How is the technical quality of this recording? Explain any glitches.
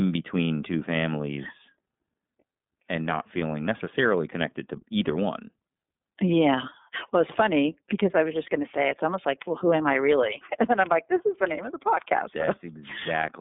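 The quality is limited by the iLBC codec throughout. The speech sounds thin, slightly rough and synthetic, with nothing above 3.8 kHz. Each 30 ms frame is coded independently, which fits iLBC's 13.33 kbps mode.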